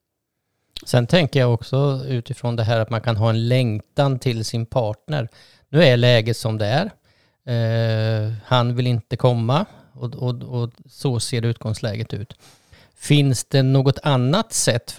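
No audible technical faults.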